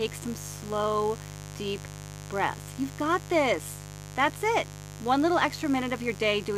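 From start to finish, mains buzz is present. Sharp switching spikes from a 50 Hz supply, likely let in by a dimmer, rectifier or an unshielded lead, land on the signal twice per mains cycle, so harmonics of 50 Hz stack up well into the kilohertz range. The result is a steady, raspy buzz sitting under the speech at roughly 15 dB below it.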